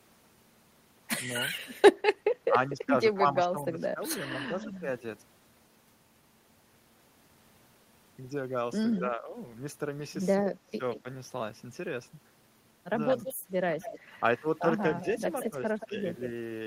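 From 2.48 to 5.01 s, the speech dips by up to about 10 dB in patches totalling around a second. This sounds like speech suppressed in double talk. Both ends were likely talking at once. The echo canceller could not tell the near talker from the loudspeaker echo. So it turned everything down.

At 8.92 s a brief echo leak appears. A copy of the speech returns 178 ms late, about 15 dB down. The far end's echo canceller likely missed part of what its microphone picked up from its loudspeaker, and sent it back.

From 8.99 to 9.35 s, the speech sinks again, by about 10 dB, for roughly 0.3 s.

From 10.43 to 11.05 s, it drops harder, by up to about 20 dB, in fragments totalling about 0.3 s. Around 10.93 s, a short scrap of the 178 ms echo slips through.

From 13.18 to 15.96 s, the speech is suppressed by up to about 15 dB, in patches totalling about half a second. Underneath it, from 13.25 to 15.86 s, a longer stretch of the 178 ms echo runs, only about 10 dB below the speech.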